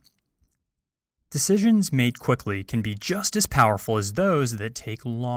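At 2.11 to 2.13 s, just before "quickly can be just", a lost packet was rebuilt from error correction: a 20 ms patch, consistent with a single packet, sounds briefly rough and noisy, with a smeared spectrogram slice.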